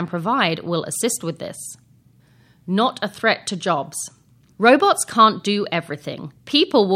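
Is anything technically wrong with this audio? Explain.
No, no technical fault can be heard here.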